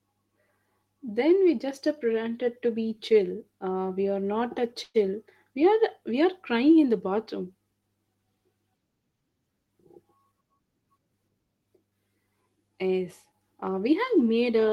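At 4.83 s, right after "we are not a", there's a call audio freeze lasting until about 4.96 s. The speech stalls and the last sound gets stretched into a fading buzzy fill for around 109 ms, with a brief 10 ms drop to silence, before things pick up exactly where they left off. Packets were likely held up in transit and the jitter buffer ran dry, so nothing is lost. It just adds roughly 109 ms of extra delay.

Later, from 10.18 s to 11.14 s, you get a jitter buffer speed-up. The receiver was sitting on more buffered audio than it wanted, probably after delayed packets arrived together, so it trimmed it back by snipping out tiny pitch-period-sized chunks again and again. The speech runs at about 110% speed over that stretch while the pitch stays put. Around a tenth of a second comes out in total, which leaves the phrase sounding a bit rushed.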